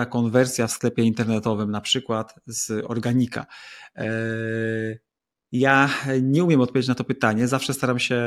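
No technical faults can be heard anywhere in the speech recording.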